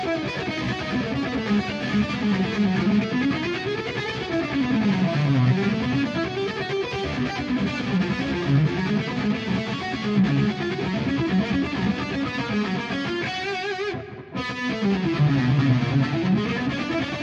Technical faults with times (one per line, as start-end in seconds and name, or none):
none